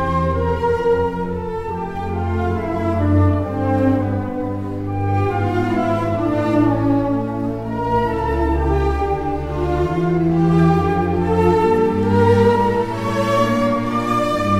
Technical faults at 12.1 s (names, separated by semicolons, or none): none